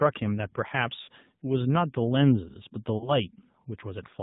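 The whole thing has been through the AMR narrowband mobile codec. Nothing above 4 kHz survives, and the speech has that buzzy, synthetic edge, which fits a low mode around 7.4 kbps. The pulse-driven vocal tract model is squeezing the voice.

From 1.02 to 1.09 s there are lost AMR speech frames. The decoder smears the last good pitch and filter settings with dropping gain, so the sound stretches and sags for about 60 ms, consistent with three missing frames. At 2.98 to 3.10 s there's a shorter warble, more like a single 20 ms frame gone.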